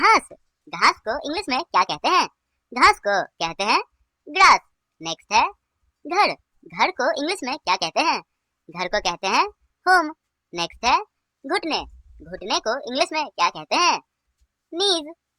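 The whole clip plays fast and high. It is a wrong sample rate fault, present from start to finish. Samples are being read out faster than they were captured, with no conversion between the two rates. Speed and pitch rise together. Everything runs about 1.38 times too fast and sits roughly 5.5 semitones sharp. That ratio fits material recorded at 32 kHz but played back at 44.1 kHz. The audio sounds hurried and high throughout.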